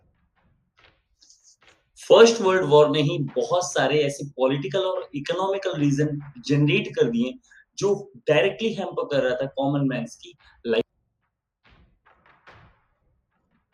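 At 10.33 to 10.61 s and again at 11.92 to 12.28 s, the sound is cut by the noise suppressor, which treats it as noise and pulls it down, by about 9 dB and about 10 dB at deepest, for roughly 0.2 s and 0.15 s, so the sound sinks or its tail is clipped short.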